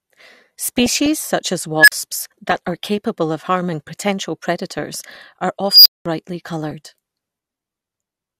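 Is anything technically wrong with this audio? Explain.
Yes. The speech carries two kinds of fault.

DAB burbling at 0.68–1.15 s, 2.47–2.84 s, 4.72–5.16 s and 6.64–6.72 s: residual bit errors, a fraction of a percent, corrupt MP2 sub-band samples and levels, giving short blips of noise and jumps in level within sub-bands over the speech.

Unstable filter at 1.78–1.92 s and 5.68–6.06 s: a recursive filter diverges, so a tone near 1.5 kHz, then near 5 kHz, swells over 95 ms and 173 ms, clips, then drops out for 40 ms and 200 ms.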